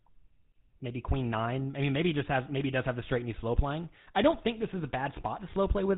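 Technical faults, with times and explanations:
Throughout, GSM full-rate codec: the speech has been squeezed through the original GSM phone codec, at a rate that fits its 13 kbps. That codec rebuilds the voice from a vocal-tract model fed by a coarse pulse train, thinning the excitation to every third sample. So you get that plainly audible buzzy, gravelly grain in the voice, and nothing survives above 4 kHz, which leaves the top end dull and muffled, like an old mobile call.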